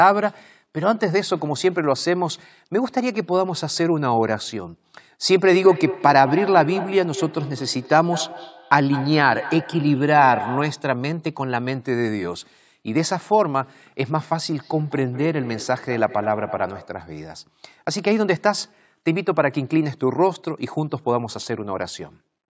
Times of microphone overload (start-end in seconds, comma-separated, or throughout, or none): none